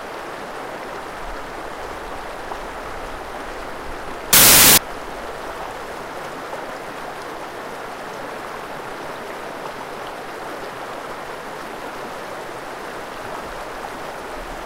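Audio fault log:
4.33–4.78 s, samples built from the wrong bytes: for a bit under half a second the sound turns into loud, harsh broadband noise, because the reader has stitched each sample's bytes together wrongly, so the jittery low bits land in the top of every value and swamp everything.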